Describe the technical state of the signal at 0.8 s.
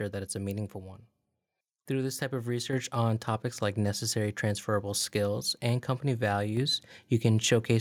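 At 0.8 s the speech signal is intact, with no audible fault at that moment.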